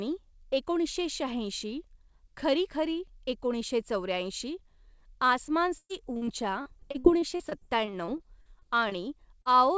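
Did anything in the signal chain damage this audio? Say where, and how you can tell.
Yes. The damage happened in the network stage of the call, between 5.78 and 8.93 s, as repeated packet loss (robotic sound). Across that stretch the audio breaks up 19 times, and about 18% of it is patched over. The longest hole lasts 114 ms. The receiver keeps stretching the last sound into each gap, so the speech turns choppy. On a spectrogram you'd see repeated smeared, flat-lined harmonic blocks. The waveform would show short stretches of oddly periodic, repetitive cycles.

There is also a short concealed packet loss at 9.41 to 9.47 s, where roughly 40 ms never arrived in time. The decoder filled the hole by extending what came before, then crossfaded back into the real signal. To the ear it is a brief smear or wobble. A spectrogram shows a short patch of copied harmonics or shaped noise inside the band. 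That band stops at 8 kHz, which fits a wideband call codec such as G.722.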